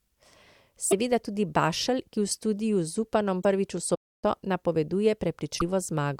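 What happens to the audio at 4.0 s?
The speech halts mid-flow right after "prvič v" in a playback stall running from 3.94 to 4.24 s, with output silent for about 281 ms before the sound carries on. The likely cause is the player running short of data, or its playback thread being held up, so nothing reached the output until it recovered. What separates this from a brief dropout or glitch is its length: nearly a third of a second of silence in the middle of a phrase, rather than a gap of a few milliseconds.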